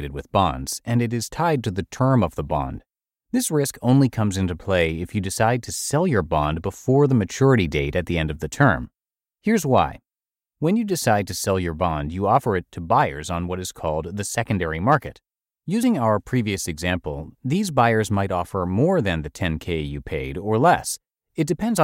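Nothing stood out on listening to the speech in this recording.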